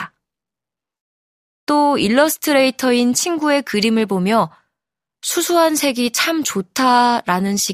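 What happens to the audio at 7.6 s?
Nothing goes wrong at 7.6 s; the speech plays through that moment intact, with no dropout, click or distortion.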